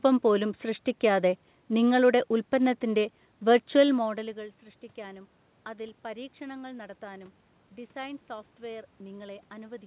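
No technical faults can be heard anywhere in the speech.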